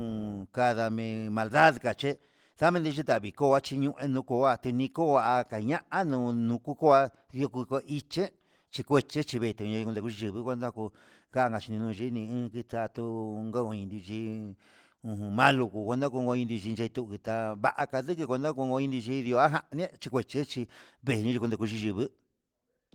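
Speech clip with no technical faults; the Opus voice compression it went through keeps the full audio band, which fits a bitrate of about 20 kbps.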